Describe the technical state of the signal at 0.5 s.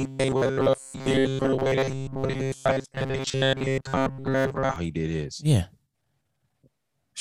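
At 0.5 s the speech carries robotic sound from repeated short buffers, running from 0.01 to 4.76 s, just before "he did his". A short buffer of about 7.5 ms is likely being replayed in place of most of the real audio, which imposes a rigid, metallic 134 Hz buzz.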